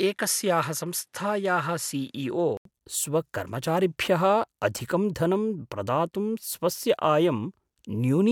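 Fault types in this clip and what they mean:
Input switched to a poorer device: For the first 2.65 s the speech is dull, with nothing above 12.1 kHz. Then an 80 ms silence and clearer sound before "स्वकर्मचारिभ्यः अधिकं धनं प्रदातुं", at an unchanged level. That gap and the new tone, unlike a steady filter, point to a likely microphone change.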